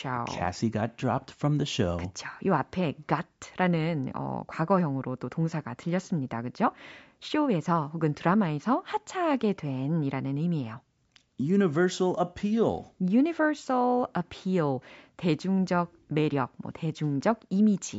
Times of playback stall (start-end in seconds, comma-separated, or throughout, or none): none